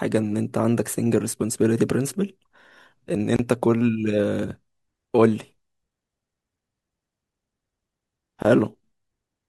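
At 3.36 s the speech drops out for about 28 ms, and at 8.42 s it drops out again for about 23 ms. Both are a gap at a join of encoded pieces: the audio was encoded as separate segments and spliced without trimming the encoder's start-up delay and final-frame padding, so that silence remains. Each gap has smeared edges, and the speech resumes exactly where it left off.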